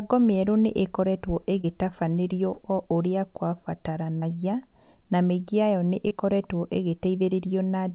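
At 1.61 s, right after "mĩerũ nĩ ĩkoretwo", at 2.54 s, just before "o ũrĩa", at 4.19 s, and at 6.08 s, after "na mĩingĩ yayo nĩ", about 30 ms of speech arrived too late each time: short concealed packet loss. The receiver stretched the preceding sound across each gap, so you hear a brief smear or wobble rather than the hard silence or click of an unconcealed dropout. All of this sits within a band that stops at 4 kHz, which fits a G.711 call path.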